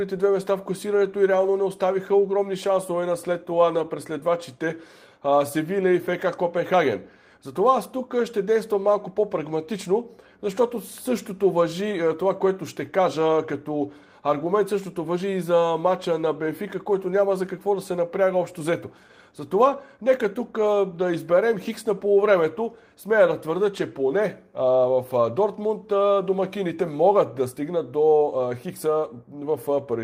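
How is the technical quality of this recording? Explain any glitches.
No glitches or faults can be heard here.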